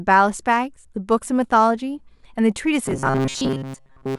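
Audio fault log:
2.86–4.18 s robotic sound from repeated short buffers: a rigid metallic buzz fixed at 134 Hz with no silent gaps, likely from most audio being replaced by a repeating buffer of about 7.5 ms.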